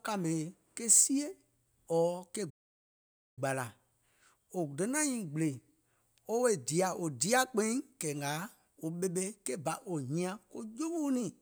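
Output from the player was cut off from 2.50 s to 3.39 s by a playback stall, likely caused by the player running short of data or having its thread blocked. The speech drops into silence mid-flow for about 870 ms, then carries on once playback recovers.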